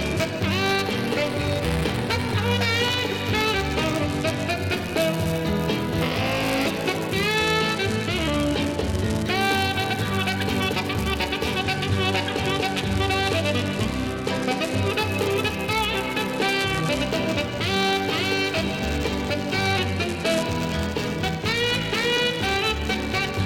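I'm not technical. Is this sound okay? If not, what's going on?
No. Throughout the clip there is a steady robotic buzz, about 200 times a second, called buffer tearing. The playback program and the sound hardware have slipped out of step, so each short chunk includes a tiny sliver of sound from about a hundredth of a second earlier. Unlike a hum, it stops whenever the sound goes quiet.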